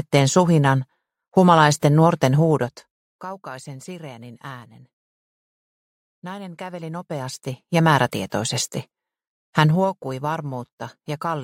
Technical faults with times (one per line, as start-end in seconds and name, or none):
2.46-3.20 zipper noise
6.64-8.03 zipper noise
9.66-9.98 zipper noise